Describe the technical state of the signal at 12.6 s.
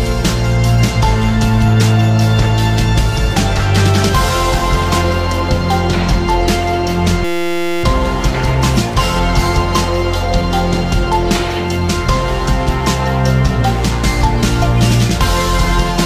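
At 12.6 s the signal is intact, with no dropout, distortion, clipping or other fault audible at that moment.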